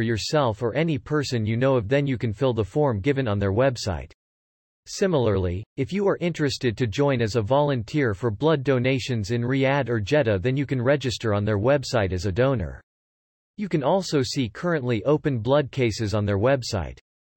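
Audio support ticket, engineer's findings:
Listened through the speech recording: nothing stood out, no symptoms found to log against any component.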